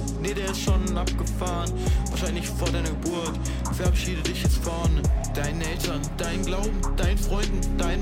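No technical faults can be heard anywhere in this clip.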